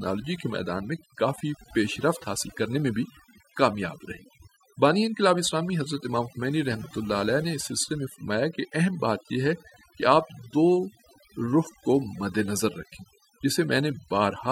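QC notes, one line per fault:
Throughout: overdone noise removal. The denoiser was pushed far too hard on this speech, so any frequency band that drifts close to its noise estimate gets pulled way down or switched off outright, and the quieter bits of the voice go along with the noise. That's why the gaps between phrases drop to near silence speckled with little twinkly chirps.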